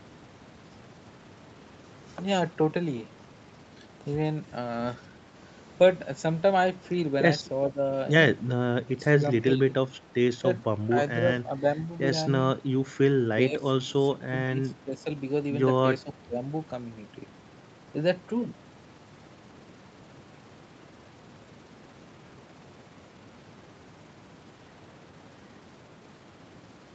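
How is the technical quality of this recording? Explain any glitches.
The speech has one recurring glitch, heard as brief level dips through the middle of the recording.

Speech suppressed in double talk occurs at 7.73–7.79, 8.95–9.12, 9.57–9.75, 10.89–10.95, 11.42–11.78, 13.37–15.06 and 16.04–16.41 s. The likely cause is an echo canceller that could not separate the talker from overlapping loudspeaker echo and ducked the talker by about 5 to 15 dB, so the speech briefly drops in level.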